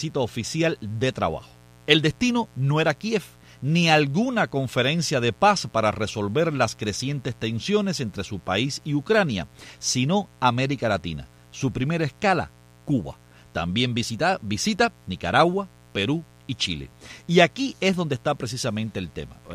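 From the very start and running the whole way through, there's a mains buzz sitting under the sound. It's built on 60 Hz, and the rasp comes from sharp switching spikes, something like a dimmer, a rectifier or a missing shield, getting into the signal twice per mains cycle. Those spikes spread harmonics well up into the kilohertz range, so it's a gritty, edgy buzz rather than a smooth hum, parked roughly 30 dB below the programme.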